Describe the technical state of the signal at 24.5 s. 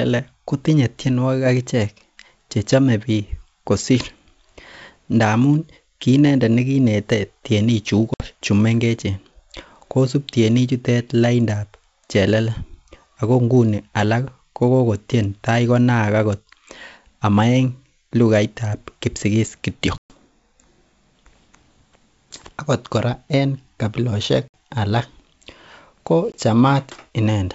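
Packet loss on an ADPCM call occurs from 24.48 to 24.54 s. About three packets, 60 ms of speech, drop out as a hard-edged silent gap. The decoder's predictor and step size lose step with the sender's. Speech returns with some distortion.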